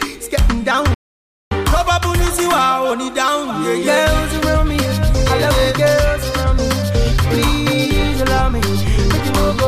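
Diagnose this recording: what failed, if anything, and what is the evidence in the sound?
Playback stall, likely the player starving for data or its thread blocking: the sound cuts out at 0.94 s and stays silent for 570 ms until 1.51 s.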